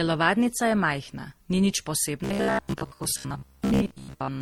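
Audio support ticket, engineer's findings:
Likely transcoding between lossy codecs, throughout: an Opus-style low-rate stage followed by MP3 re-encoding. Mixed Opus and MP3 artefacts stacked together; content extends to 20 kHz.

2.24 s to end (4.41 s): likely robotic sound from repeated short buffers. Audio arrives too seldom, and a roughly 15 ms block loops in place of most of the real signal. The result is a rigid metallic buzz at 66.8 Hz.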